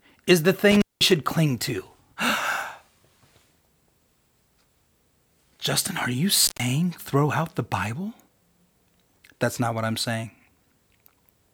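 At 0.71 to 1.12 s the speech cuts out through an intermittent contact. A loose plug or cable briefly opens the line for about 192 ms. Crackle marks each edge, with faint hiss in the gap. It recurs at 6.44 to 6.63 s, opening for about 123 ms.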